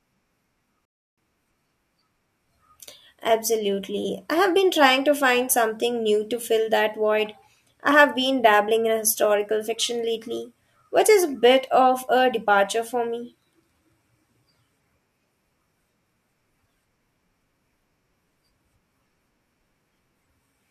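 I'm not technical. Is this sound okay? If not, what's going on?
No. A rebuffering stall happens at 0.85 seconds: the speech cuts to silence and picks up again at 1.18 seconds, exactly where it left off. The player simply ran out of downloaded audio and had to wait for more to arrive before carrying on. No speech is lost, but the pause adds about a third of a second, 0.32 seconds, to the clip.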